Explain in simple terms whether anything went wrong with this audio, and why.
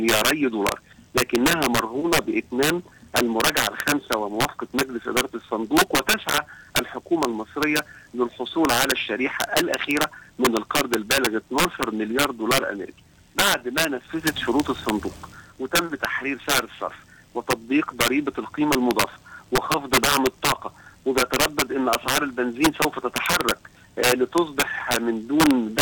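Sharp, violent cracks burst out on the loudest moments all through the clip, far harsher than ordinary distortion. This is integer overflow: the level was pushed too high, and instead of being capped, a small fraction of peaks wrapped around to the opposite extreme.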